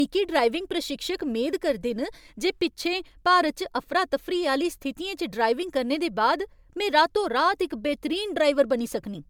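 Generation loss runs throughout: swirly, hollow speech with smeared attacks, likely from MP3 re-encoding about three times, consistent with 128 kbit/s, with nothing above 20.1 kHz.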